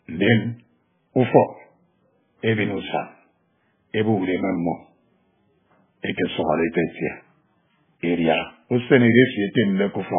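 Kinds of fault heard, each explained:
MP3 compression: Nothing is heard above 3.5 kHz anywhere in the speech, so it sounds dull and muffled. Weak detail flickers in and out, leaving a heavy watery, swirling texture. The likely cause is an MP3 encoder starved of bits, consistent with roughly 9 kbps.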